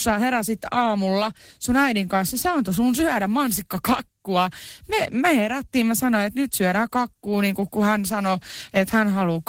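No technical faults can be heard in this recording.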